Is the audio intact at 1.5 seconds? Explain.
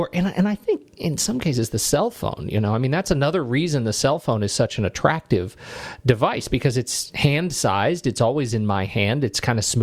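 Yes, the audio is intact at 1.5 seconds, with no audible fault at that point.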